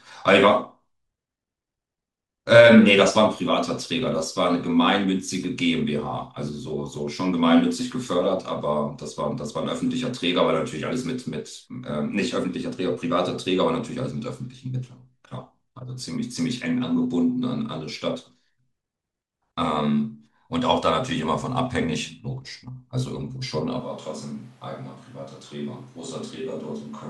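At 23.8 s the recording likely abandons the close microphone and carries on with a distant one, a switch to a distant microphone that lasts to the end of the clip. The change is abrupt: the voice suddenly turns roomy and hollow, thins out in the bass, and drops by around 5 dB. Background room noise also comes forward, sitting roughly 25 dB below the speech.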